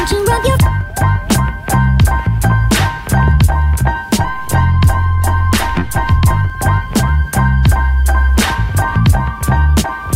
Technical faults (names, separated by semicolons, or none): DC step